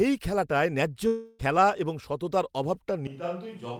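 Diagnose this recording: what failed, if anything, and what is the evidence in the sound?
At 1.07 to 1.41 s there's a long network dropout: about 320 ms lost, concealment buzz fading, speech resuming at "খেলা এবং সততার". Likely packet loss.

From 3.07 s to the end it turns roomy, thinner and about 10 dB quieter with more background, likely a switch to a distant microphone.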